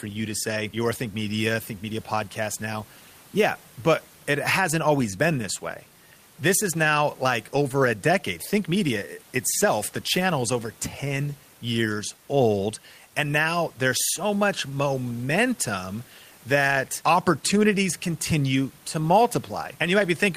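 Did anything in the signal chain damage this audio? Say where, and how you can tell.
No, nothing in the signal chain stood out on listening, and the only background is the room's own noise sitting about 32 dB below the speech, which was captured with the recording rather than added by any stage.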